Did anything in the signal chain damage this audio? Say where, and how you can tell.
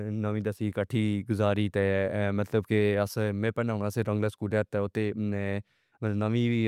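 No, nothing in the signal chain damaged this recording.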